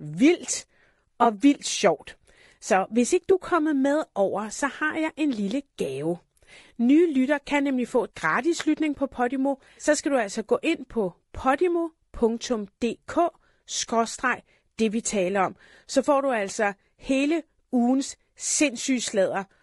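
Speech that sounds rough and grainy throughout, with noise between harmonics and a thin, synthetic top band, likely from low-delay AAC compression (AAC-ELD) at a low bitrate, around 32 kbps. Brief smeared, phasey patches at 1.23–1.26 s and 11.59–11.62 s come from AAC frame loss with concealment, where the decoder filled each lost 20 ms frame from the last good spectrum.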